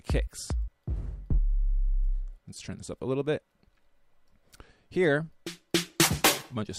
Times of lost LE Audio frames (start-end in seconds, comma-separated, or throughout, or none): 2.54-2.57